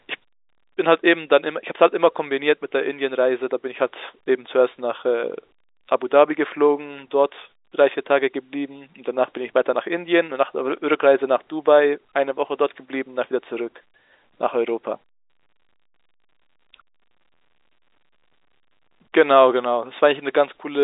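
No technical faults are present.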